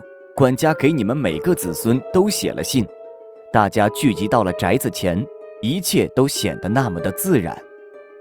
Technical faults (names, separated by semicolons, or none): call bitrate drop